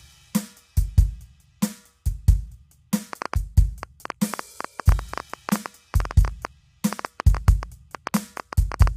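A music clip carrying low-delay AAC compression throughout, plainly audible as a rough, grainy texture with noise filling the gaps between harmonics and nothing above 15.6 kHz. The character points to AAC-ELD, likely at around 32 kbps. From 3.13 s to 8.88 s a train of clicks rides over the music, around fifty pulses at about 8.4 per second, spaced irregularly and standing roughly 10 dB above the signal. The clicks share much the same shape and continue regardless of what the music is doing, which separates them from codec artefacts tied to the content. Interference from nearby equipment, a faulty connection or a power-supply fault is the likely source.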